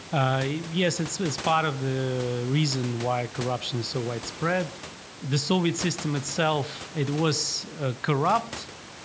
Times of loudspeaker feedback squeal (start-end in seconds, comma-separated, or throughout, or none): none